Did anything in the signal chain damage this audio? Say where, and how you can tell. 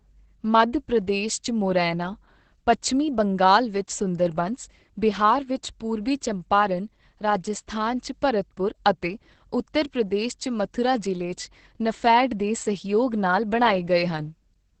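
Yes. The damage sits at the codec stage and runs through the whole speech clip. Nothing is present above 8.7 kHz, and the voice sounds muffled, hoarse and faintly robotic, which is Opus voice compression working hard in SILK mode at wideband. The linear-prediction coder models the vocal tract and quantises the excitation coarsely, roughening the voice. That level of heavy damage points to a bitrate near 10 kbps.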